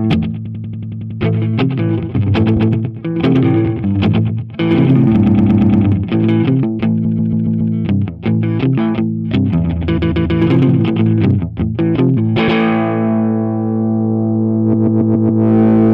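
Stuttering loops mark repeated frames, where short blocks of compressed audio play again. This happens at 0.44–1.19 s (93 ms block), 2.56–2.70, 5.25–5.83 (116 ms), 7.04–7.73, 9.96–10.38, 12.47–12.59 (116 ms) and 14.72–15.42 s, with 139 ms blocks where not noted otherwise.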